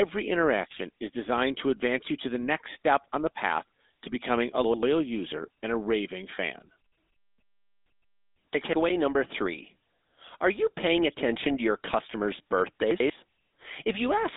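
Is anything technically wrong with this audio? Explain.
Yes. The whole speech clip has been through the GSM full-rate codec, at a bitrate consistent with 13 kbps. It vocodes the voice, modelling the vocal tract and exciting it with a regular pulse train. The line sits in roughly 250 Hz to 3.7 kHz with nothing above 3.8 kHz, and the damage is plainly audible as a buzzy, gravelly roughness. That grain, rather than just dullness, separates it from simple band-limiting.

There are also chunks out of order at 4.64–4.83 s (after "path to becoming a", before "user and a raving"), 8.55–8.73 s (before "number three") and 12.91–13.10 s (after "attention to your customers'"). In each, a roughly 93 ms chunk plays one slot late, swapping with its neighbour, so nothing is missing but the sequence jumbles. Unlike a dropout, no gap is heard.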